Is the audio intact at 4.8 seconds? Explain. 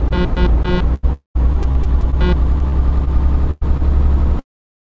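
Yes, the audio is intact at 4.8 seconds, with nothing disturbing it beyond the call path's normal band limit, which leaves no content above 8 kHz.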